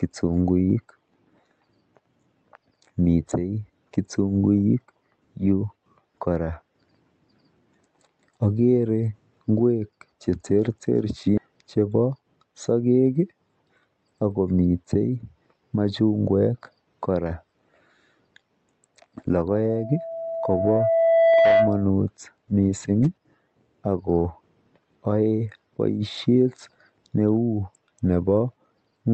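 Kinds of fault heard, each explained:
Skip ahead: at 11.37 to 11.39 s, roughly 0.4 s of speech is discarded and playback jumps straight to later audio, leaving an abrupt join with no gap.
Jitter buffer speed-up: from 11.47 to 12.37 s, the receiver trims short pitch-period pieces, about a tenth of a second in all, so speech runs at 110% speed with unchanged pitch.
Loudspeaker feedback squeal: from 19.49 to 21.91 s, a 662 Hz tone circulates between loudspeaker and microphone, swelling over about 2 s to about 5 dB above the speech.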